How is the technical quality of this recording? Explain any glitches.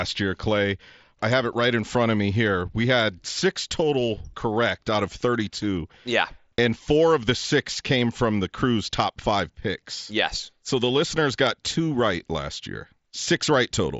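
The speech comes through a wideband Bluetooth headset link using the mSBC codec, so it is limited to about 8 kHz with a faint grainy edge on louder syllables, and there are no glitches to point to.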